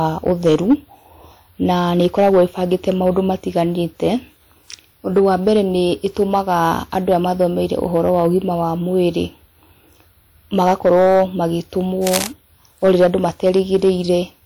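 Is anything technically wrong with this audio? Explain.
Yes, the speech has two faults.

Hard clipping runs through the whole clip. The signal is driven about 7 dB past what the stage can pass, so a small fraction of peaks are sliced flat, adding high harmonics. It sounds like crackle on loud syllables, tied to peaks, unlike steady hiss or noise.

Cable scratch noise appears from 12.04 to 12.29 s as a quarter-second of dense, irregular scratching only a little below the speech level. It is likely caused by a worn cable or connector being moved, its contact resistance jumping rapidly. Unlike clipping, it ignores the speech's loudness.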